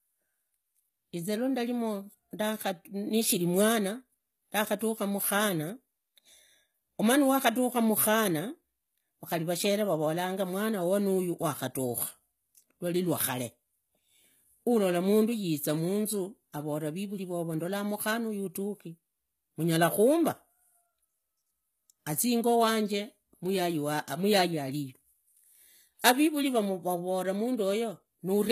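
The speech runs through what is likely HE-AAC compression at a very low bitrate, consistent with something around 20 kbps, for the whole clip. Only the lower spectrum is properly coded; the treble is rebuilt by copying lower bands upward under a coarse envelope, so its harmonics don't line up with those below. The s sounds come out gritty and lispy, the coding damage is plainly audible, and nothing remains above about 14.9 kHz.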